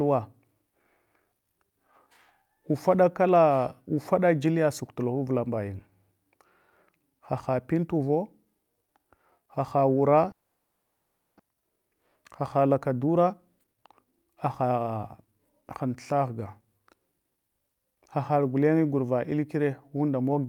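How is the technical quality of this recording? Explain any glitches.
Two glitches stand out, one right after the other, in the middle of this speech recording.

From 10.31 to 11.41 s the speech stops and is replaced by a smeared continuation of the last sound, a buzzy tail that fades but never drops to true silence. That stretch of fill runs about 1.08 s. The likely cause is a long network dropout: packets stopped arriving, so the receiver kept extrapolating the last sound. When real audio resumes, roughly 600 ms of speech is simply gone. The delay grew by around half a second in the process.

From 13.00 to 15.97 s the speech runs noticeably quick, about 115% of normal speed, yet the pitch stays put. That's a jitter buffer speed-up. After the outage, the buffer was left holding too much audio. To work off that backlog, the receiver snipped out tiny slices, one or a few pitch periods at a time, again and again, and shed roughly half a second overall. 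The result sounds hurried, not chipmunky.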